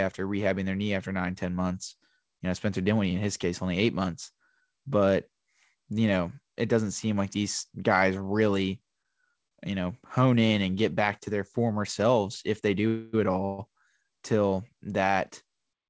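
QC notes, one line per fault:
8.86–9.53 s, repeated stalls (stutter): between "like these guys really" and "you know hone in", the audio catches four times, each gap filled by stretching the sound just heard, about 94 ms in total, the longest 34 ms. Packets arrived late enough to empty the jitter buffer repeatedly, so the receiver padded each wait. Nothing is lost, but the passage drags and hiccups. It is the cluster of brief stretches, rather than one long hold, that sets it apart from a freeze.
12.87–13.15 s and 13.45–13.60 s, call audio freeze: just after "former selves if they", the sound hangs and is drawn out as a fading buzz or hiss for 0.26 s. Shortly after, it hangs again for 0.13 s. Neither falls into silence, and the audio picks up exactly where it stopped, so nothing is skipped and the rest arrives that much later. The likely cause is delayed packets running the jitter buffer dry. 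Each is a single sustained hold rather than a string of tiny catches, and no material is missing as it would be in a dropout. The filled sound carries the same 8 kHz ceiling as the G.722 call path.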